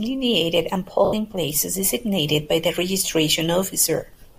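From 1.05 to 1.13 s, lost LE Audio frames break the speech for 80 ms, which fits eight 10 ms frames. The decoder repeats the last spectrum with scrambled phase, so the voice briefly turns into a hissy, noisy smear. The light LC3 compression, likely the cause of that frame structure, adds only a faint graininess.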